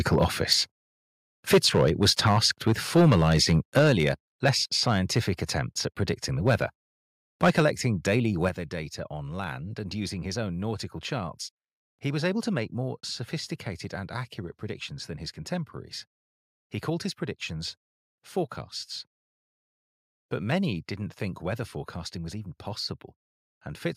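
Speech with harsh, crackling peaks at 0.11–0.53 s, 1.53–5.58 s, 6.1–6.63 s and 7.43–8.47 s, reaching about 4 to 8 dB over. Microphone overload is the likely cause, flattening about 0.7 to 3 percent of samples. Sudden level drops follow at 0.53 s (about 4 dB), 3.79 s (about 5 dB), 7.5 s (about 2 dB) and 8.49 s (about 6 dB). Voice and background fall together. Microphone volume stepped down is the likely cause, with call software cutting input gain.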